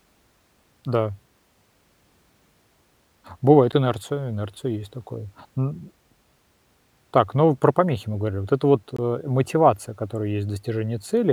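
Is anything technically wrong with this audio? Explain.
Yes. The speech has two brief dropouts, at 3.72 s and 8.97 s, the first heard as a small tick where the sound snaps off and straight back on. The second is slightly fuller, closer to a tiny pop. Both are blocks of digital silence, about 10 ms and 20 ms long, where samples were replaced by zeros, likely because the output buffer was not filled in time. With no fade in or out, each edge is abrupt.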